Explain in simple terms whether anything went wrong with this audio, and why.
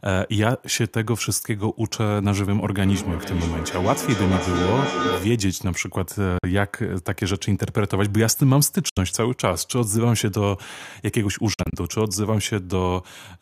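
From 2.85 to 5.58 s there is a feedback echo between two devices. The speech keeps coming back at a steady gap of roughly 0.4 s, each time thinner and more ringing, at its loudest nearly as loud as the original. One device is playing the other's sound into a microphone whose own echo canceller can't remove it. A room echo would blur the speech instead of repeating it at a fixed beat.

The sound also cuts to silence, most likely a Bluetooth dropout: at 6.38 s for about 46 ms, at 8.89 s for about 70 ms, and from 11.54 to 11.75 s as several short holes adding up to about 93 ms. Afterwards the speech continues as if it had kept playing, rather than stalling and picking up where it stopped.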